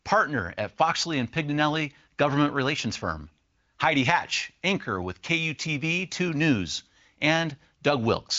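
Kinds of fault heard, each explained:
No kinds of fault are heard in this speech, which carries the band-limited sound of an AMR wideband link, with nothing above about 7.6 kHz.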